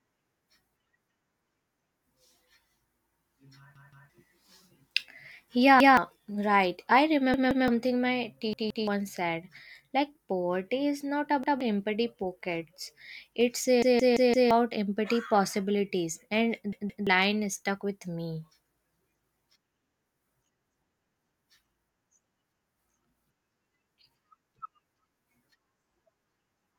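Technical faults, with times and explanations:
3.76–4.10 s, 5.80–5.97 s (just before "right I"), 7.34–7.68 s (just after "right I"), 8.53–8.88 s, 11.44–11.61 s (between "poverty is not" and "empty pockets"), 13.82–14.51 s, 16.73–17.07 s: repeated buffer. Each time new audio arrived late, so the same 171 ms chunk replays one to four extra times with a hard join at every repeat. That chunk length fits an 8192-sample buffer. The longest stutter, at 13.82 s, swallows roughly 0.7 s of speech. Unlike a dropout, there is no silence, and unlike an echo, the copies are identical and don't fade.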